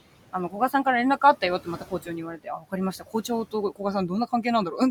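Throughout the speech, noise suppressor artifacts push the room noise, which sits about 18 dB under the speech, down about 17 dB between phrases, leaving a residue that shows as blotchy, blinking background on a spectrogram.

At 1.64–2.09 s, 2.34–2.73 s and 2.98–3.29 s, speech is cut by the noise suppressor. Soft parts are mistaken for noise and dropped up to about 14, 16 and 13 dB, and they sound swallowed. The events leave about 150, 200 and 150 milliseconds of notched waveform envelope.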